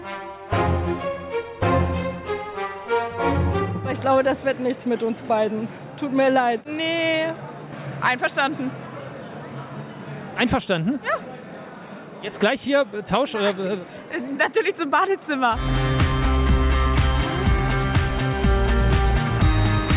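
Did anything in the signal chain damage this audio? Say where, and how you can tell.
No, nothing in the chain audibly damaged this audio.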